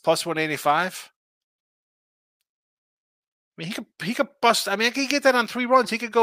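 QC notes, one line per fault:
Nothing stood out on listening.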